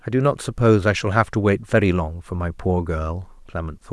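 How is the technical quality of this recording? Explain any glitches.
Nothing here sounds like a glitch at all: the recording runs along steadily with no dropouts, clicks or other technical hiccups to point to.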